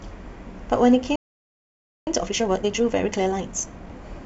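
At 1.16 s the speech just cuts out and stays silent until 2.07 s, a gap of about 0.91 s. That's a playback stall: the sound stops mid-flow rather than pausing naturally, and it most likely happened because the player ran dry of data or its audio thread got blocked for a moment.

Right from 2.07 s through 3.89 s you get time-compressed catch-up, with the player burning off the backlog the stall built up. It runs at 1.5 times normal speed, so the talking sounds rushed, but the pitch stays put because it's cutting out small slices and cross-fading across the joins rather than simply speeding up.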